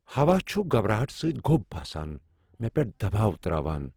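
From start to finish the speech sounds rough and grainy, with a noisy texture in place of clean tone, though the full bandwidth remains. The cause is likely Opus compression in its CELT music mode, running short of bits and filling bands with noise, which fits a rate near 16 kbps.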